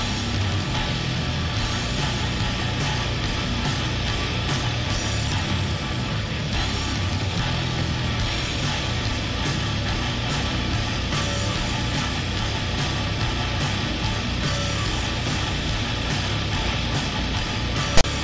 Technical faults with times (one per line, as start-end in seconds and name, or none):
17.97-18.04 file tags played as audio